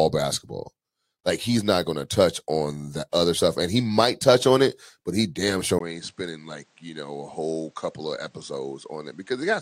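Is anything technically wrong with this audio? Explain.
Yes. From 5.79 s, right after "it but he damn", the speech goes dull and quieter to the end: an input switched to a poorer device, likely a swap to another microphone. A 20 ms gap marks the switch. Afterwards nothing passes above 9.1 kHz, the level falls by about 10 dB, and a new noise floor sits roughly 35 dB below the speech. That combination of changes, rather than a single filter, separates it from simple low-pass filtering.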